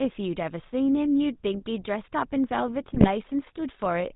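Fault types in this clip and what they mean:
GSM full-rate codec: The whole clip goes through the old GSM full-rate coder, which rebuilds speech from a vocal-tract model driven by sparse pulses. That gives the plainly audible buzzy, gravelly grain throughout, with nothing above 4 kHz, consistent with a 13 kbps channel.
GSM bit errors: From 2.94 to 3.08 s, corrupted bits reach the decoder and scramble its filter, pitch and gain values, so the speech briefly squawks and gargles with jumpy level. That 0.14 s burst fits roughly five damaged 20 ms frames.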